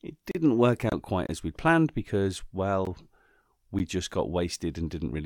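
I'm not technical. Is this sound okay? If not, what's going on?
No. There are four blocks of digital silence, where the sound briefly drops to nothing. They occur at 0.31 s, 1.27 s just before "as we'd planned because", 2.85 s just after "as we'd planned because", and 3.79 s just before "just got".

There is also a corrupt frame muted from 0.89 to 0.93 s. Two damaged chunks of compressed audio were skipped and replaced by a short silent gap.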